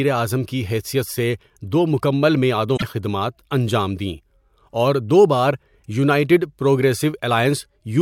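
A speech clip with a single glitch from damaged data in a compressed stream, running from about 2.73 to 2.82 s. Over those roughly 90 milliseconds the speech is broken up. Corrupted bytes made the decoder misread its frames and lose sync until it found the next valid frame header. A spectrogram shows a brief patch with hard vertical edges, and the waveform shows a discontinuity at each end.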